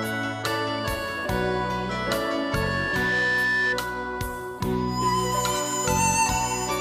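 A microphone picks up its own loudspeaker, causing loudspeaker feedback squeal: a 1.8 kHz tone swells over about a second from 2.12 s, rising a few decibels above the sound, until 3.80 s.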